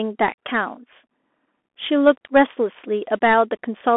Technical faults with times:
0.00-3.96 Bluetooth CVSD headset codec

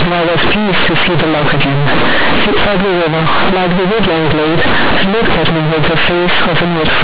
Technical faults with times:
0.00-7.04 companded audio read as linear

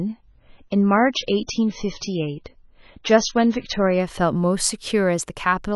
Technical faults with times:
0.00-4.00 adaptive stream starting at a low bitrate

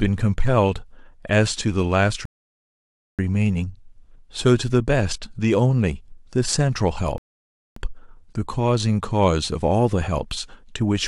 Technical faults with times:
2.25-3.19 rebuffering stall
7.18-7.76 rebuffering stall

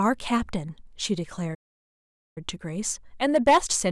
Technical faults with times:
1.54-2.38 playback stall
3.25-3.91 hard clipping

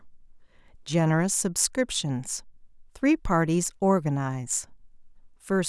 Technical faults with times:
none

